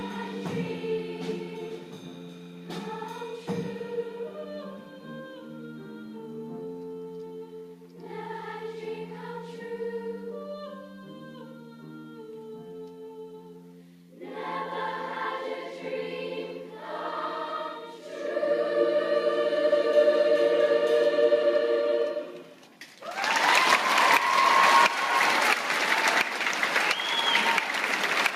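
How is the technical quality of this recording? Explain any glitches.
No technical glitches can be heard anywhere in the recording, and the signal stays continuous and stable throughout.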